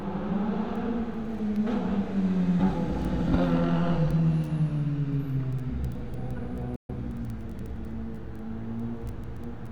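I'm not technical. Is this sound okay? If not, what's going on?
No. At about 6.76 s the sound briefly fades out and goes silent, returning at about 6.94 s. This is a digital broadcast dropout: the receiver lost a few frames of signal, muted quickly, and whatever was playing during that gap is gone.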